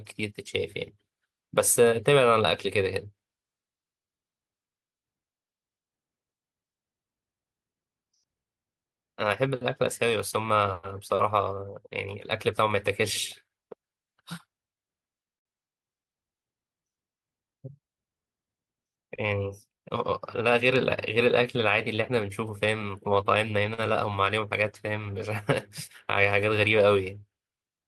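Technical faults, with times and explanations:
17.40 to 18.03 s, jitter buffer speed-up: the receiver's buffer had built up more speech than it aims to hold, so it trimmed short slices, each one or a few pitch periods long, again and again over this stretch, taking out roughly a tenth of a second in total. Playback runs at about 112% of normal speed while the pitch stays put, so the speech sounds briefly hurried before settling back to its normal pace.
23.74 to 23.93 s, short stall from a late packet: a packet had not arrived when it was due, leaving the jitter buffer empty, so the receiver stretched the last sound for 44 ms until the data turned up, then carried on from the same point. Nothing is lost, but one sound is held too long, with a slight buzz or dip, and everything after it is pushed about 44 ms later.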